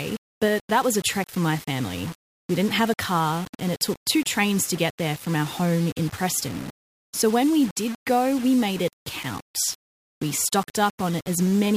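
From start to finish the speech sounds grainy and harsh, its quiet stretches sputtering or dropping out, with distortion riding on the signal only about 20 dB down. This is likely low bit depth without dither: samples rounded to roughly 5 bits.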